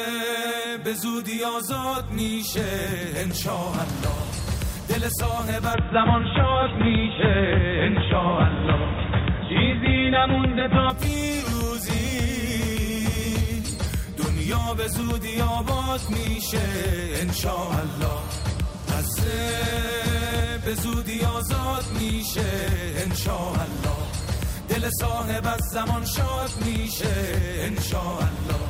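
Input switched to a poorer device, from 5.74 s to 10.90 s: the sound abruptly turns dull and boxy, with nothing above 3.8 kHz, then opens up again at the end of that stretch. The cause is likely a change of capture device mid-recording, to a narrower-band microphone or a headset's call profile. There is no gap at either switch, but the level shifts by about 5 dB and a new noise floor appears, roughly 50 dB below the signal.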